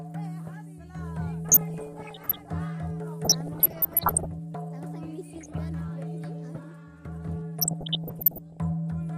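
DAB burbling at 1.45–2.45 s, 3.25–4.26 s, 5.33–5.60 s and 7.59–8.57 s: bubbling, chirpy squelches or watery blips where bit errors under weak reception corrupt MP2 sub-band levels, worst at 3.25–4.26 s and 5.33–5.60 s.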